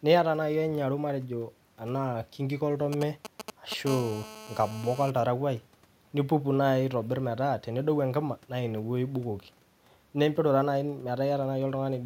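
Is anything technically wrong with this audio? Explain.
Yes. There are two radio-interference faults in this speech, one directly after the other.

From 2.93 to 3.89 s there is a galloping dit-dit-dit of short buzzes, roughly 10 dB below the speech. These are GSM signalling bursts. A nearby 2G phone is sending short groups of transmissions while it signals to the network, and the audio circuitry rectifies those radio pulses. Each group comes through as a short burst of buzz at the 217 Hz frame rate.

From 3.89 to 5.10 s the pattern becomes a continuous, hard, raspy buzz at 217 Hz with a dense stack of harmonics, about 15 dB below the speech and unrelated to it. This is GSM phone buzz. The same phone is now in a call and transmitting a burst 217 times a second without a break. Rectification in the audio path turns that steady pulse train into an audible tone.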